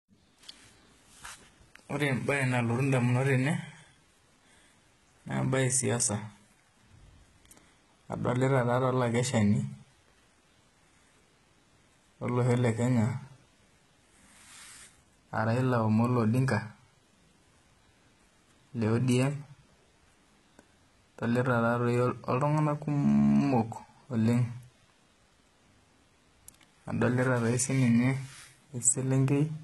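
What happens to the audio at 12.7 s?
At 12.7 s the speech carries the same damage heard across the whole clip, most likely HE-AAC compression, and the heavy artefacts point to a low bitrate around 16 kbps. Only the lower band is truly coded. The treble is synthesised by copying lower bands upward under a coarse envelope, so s sounds turn gritty, metallic or lispy, and nothing sounds above 11.8 kHz. A plain low-pass would leave dull, clean treble. This treble is bright but wrong.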